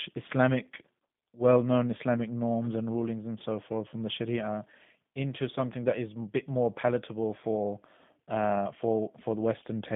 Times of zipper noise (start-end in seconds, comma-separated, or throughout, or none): none